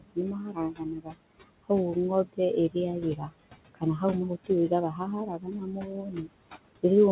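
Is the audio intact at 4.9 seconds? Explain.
No. From 4.92 to 5.01 s, a stretch of about a tenth of a second, there is speech cut by the noise suppressor. The suppressor mistook part of the speech for steady background and turned it down along with the noise, by up to about 8 dB, so that sound comes out swallowed and faint. On the waveform the envelope sags briefly and unnaturally in the middle of speech. On a spectrogram the energy in that slice fades across the bands where the speech should continue.

The moment also has the noise suppressor artifacts that run through the whole clip. The suppressor adjusts each frequency band frame by frame, so the leftover noise pumps with the speech. The waveform's quiet gaps dip lower than the noise beneath the speech.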